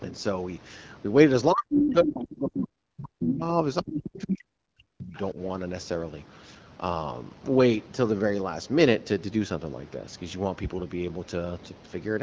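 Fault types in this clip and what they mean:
speech suppressed in double talk: The talker's level collapses in three places, from 1.53 to 3.62 s, from 3.82 to 5.15 s, and briefly at 5.33 s. The deepest dips reach about 40 dB, with the last one only about 10 dB. The likely cause is an echo canceller that cannot separate the near talker from loudspeaker echo while both sides speak, so it attenuates everything.
other side's voice leaking through: A second voice surfaces in short fragments at 1.86 to 1.93 s, 3.25 to 3.36 s and 3.87 to 4.22 s. The first fragment sits about 5 dB below the main speech and the later two about 10 dB below. These fragments fall inside the suppressed stretches. The likely cause is residual loudspeaker echo that the echo canceller failed to remove from the microphone signal during double talk.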